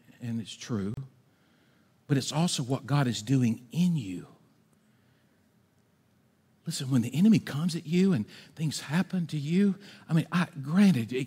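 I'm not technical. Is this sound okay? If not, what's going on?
No. At 0.94 s, right after "and it's", the speech drops into a brief silence of about 32 milliseconds before carrying on from where it stopped, ending at 0.97 s. This is a gap at a join of encoded pieces. The recording was compressed in separate sections and then stuck together. Each section kept the short stretch of silence the compression adds at its start and end, so a small hole with blurred edges opens at the seam.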